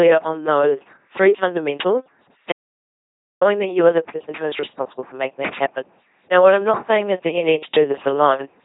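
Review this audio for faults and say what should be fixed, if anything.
The whole clip has the buzzy, mechanical robot quality of an LPC-10 vocoder, which fits 2.4 kbit/s coding: each frame is rebuilt as purely voiced pulses or pure noise through a ten-pole filter. A spectrogram shows smeared formants, rigid harmonic combs and nothing above 3.8 kHz. Prevent it by recording or transmitting with a higher-rate wideband codec.

An audio dropout to silence runs from 2.52 s to 3.41 s, losing about 0.89 s of speech; it was likely caused by the input feed being lost while writing continued. The waveform sits flat and the spectrogram goes fully blank, with no room tone. Prevent it by securing connections and monitoring input levels during capture.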